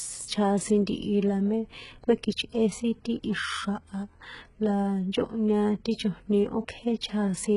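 Throughout, the speech likely passed through very-low-bitrate HE-AAC compression, which fakes treble from copied lower bands: s sounds turn gritty, with nothing above 11.1 kHz.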